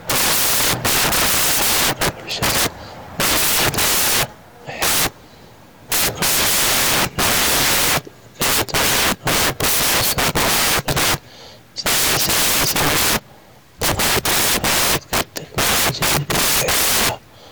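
Loud white noise covers the whole clip: samples built from the wrong bytes, so the fast-changing low bits dominate each value.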